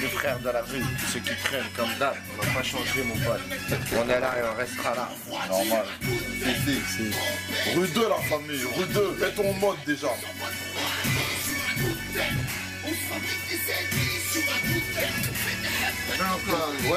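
From 3.68 to 4.66 s, processor overload crackle: roughly a hundred missed buffers of a millisecond or two leave silent gaps, heard as gritty tearing rather than one clean dropout.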